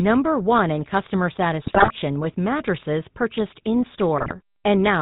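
Throughout the clip the converter's sample clock wanders by roughly a couple of microseconds, so each sample is taken a touch early or late. The resulting sample clock jitter error sits around 35 dB below the speech and tracks how steeply the waveform is changing, so it comes through as a fine hiss and grain that thickens on loud, bright syllables and drops out in the pauses.

Over the whole clip the speech has also been through the GSM full-rate codec, and the damage is plainly audible. The codec rebuilds the voice from a vocal-tract filter excited by a sparse, regularly spaced pulse train, which fits the 13 kbps full-rate scheme. The band stops at 4 kHz, taking the air off sibilants, and the voice has the buzzy, gravelly texture typical of that coder.

From 1.62 to 1.91 s, just after "in customer" and running up to "with mattresses purchased", GSM bit errors reach the decoder. Corrupted filter, pitch and gain parameters distort the spectral shape and the level from frame to frame, so for this stretch of nearly 0.3 s the speech breaks into squawks, pops and a wet gargling.

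A shorter burst of GSM bit errors follows from 4.18 to 4.33 s, after "with mattresses purchased". Damaged parameters again reach the decoder over about 0.15 s, producing a brief squawk and gargle.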